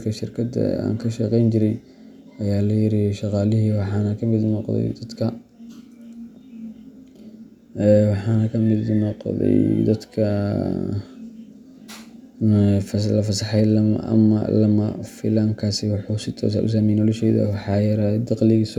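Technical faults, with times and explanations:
No technical faults can be heard in this recording.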